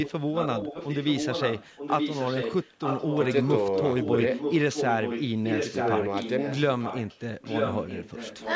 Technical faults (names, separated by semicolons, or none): echo leak